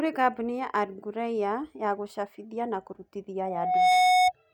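Loudspeaker feedback squeal from 3.45 to 4.32 s: the microphone re-amplifies its own loudspeaker output, so a 732 Hz tone swells over about half a second to roughly 10 dB above the speech.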